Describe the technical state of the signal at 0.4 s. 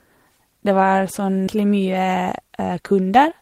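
At 0.4 s the speech signal is intact, with no dropout, distortion or other fault present at that moment.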